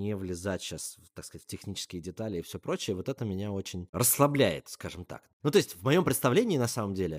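No technical faults can be heard anywhere in this speech recording. Nothing in the audio calls for a timestamp or an explanation of something going wrong.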